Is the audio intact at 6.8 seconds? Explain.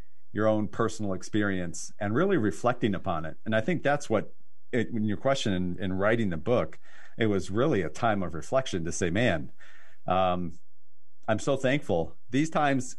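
No, not quite. At 6.8 seconds the speech carries a DC offset, which runs through the whole clip rather than starting there. The entire waveform sits shifted off the zero line by a constant amount, about -32 dBFS. You won't hear it as a tone or a hum. It eats a bit of headroom on one side and shows up as a steady spike at 0 Hz if you look at a spectrum.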